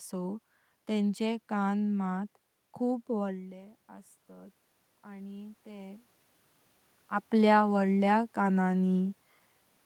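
Right after "मात खूप", around 3 s, the talker drops away and the automatic gain starts rising from 3.25 to 6.11 s, lifting about 6 dB so voice and room noise swell together.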